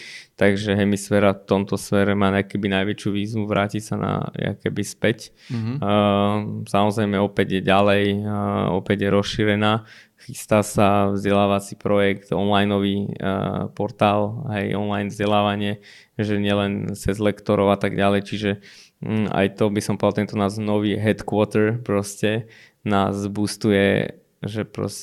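No technical faults can be heard anywhere in the speech. Nothing in the recording calls for a time mark or an explanation of what went wrong.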